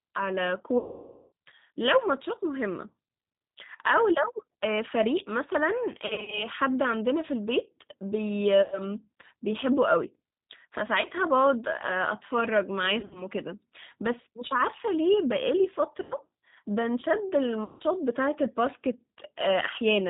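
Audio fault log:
throughout: G.729 codec. The speech passes through an 8 kbit/s G.729A link, which rebuilds each 10 ms frame from a vocal tract filter, a pitch predictor and a handful of pulses instead of sending the waveform. Nothing above 4 kHz survives, so the sound is dull and band-limited. The sparse pulse excitation leaves the speech plainly rough and slightly synthetic.
0.78–1.32 s, 5.92–6.48 s, 8.62–8.84 s, 11.02–11.08 s, 12.99–13.25 s, 16.03–16.14 s, 17.64–17.83 s: VoIP packet loss concealed by the speech codec. Packets went missing in a pattern that fits 20 ms packets, and the decoder filled the gaps by repeating its last pitch and filter at falling gain. The first gap is the longest, about 540 ms, long enough for the sound to smear into a buzzy tone or coloured noise that fades away. At 5.92 s about 200 ms is lost in short runs spread over 400 ms. At 12.99 s about 120 ms is scattered over 160 ms in the same way. 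The others are solid gaps of about 100, 20, 80 and 160 ms, each filled with the same stretched, fading sound. Because each frame is predicted from the one before, the speech stays weak and distorted for a short while after every gap.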